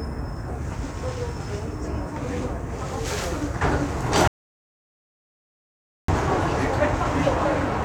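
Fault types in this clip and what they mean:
Audio dropout to silence: the sound cuts to dead silence for about 1.8 seconds, no room tone at all, likely a lost input link while recording continued.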